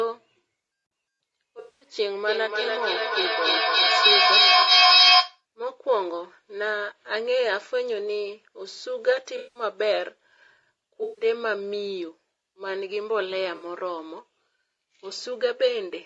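Throughout the speech there is a rough, grainy texture with noise between the harmonics, likely from low-delay AAC compression such as AAC-ELD at a bitrate around 32 kbps. Unlike a dropout, this damage never lets up. The band stops at 8 kHz, as expected from the call microphone processing.

From 1.59 to 1.87 s, AAC frame loss with concealment leaves a smeared, phasey patch where the decoder fills the gap from the last good spectrum.

From 2.28 to 5.45 s, feedback echo between two devices returns each phrase roughly every third of a second, thinner and ringing each time. At its loudest, about 9 dB above the speech, the repeats pile up instead of fading. The regular spacing sets it apart from room reverb.

Further concealed frame losses follow at 4.61 to 4.71 s, 9.37 to 9.63 s, 11.03 to 11.25 s, and 13.55 to 13.65 s. Each is a brief smeared or noisy blur rather than a hard click or a silence.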